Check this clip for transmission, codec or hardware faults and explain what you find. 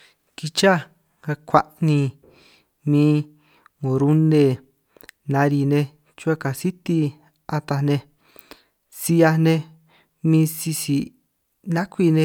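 No faults found in this recording.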